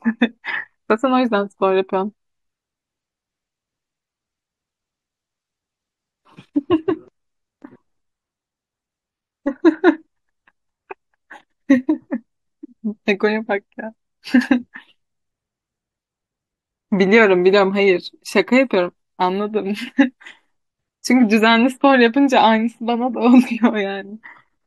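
Speech recording, with no technical faults audible anywhere.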